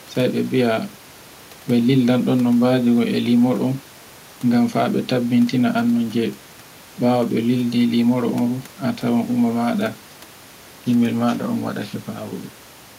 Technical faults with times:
none

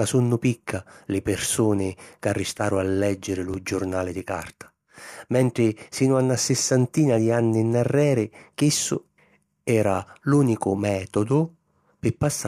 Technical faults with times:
3.54 overlapping chunks

